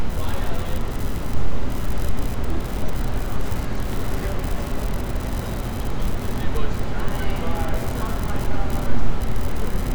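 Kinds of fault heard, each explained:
No fault of any kind is audible anywhere in the clip.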